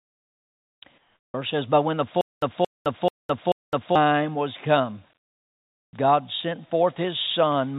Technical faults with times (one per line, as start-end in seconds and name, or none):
0.98-1.34 comfort noise in place of the background
2.21-3.95 stutter with silent gaps
5.18-5.93 comfort noise in place of the background
5.91 onset clipped by the voice detector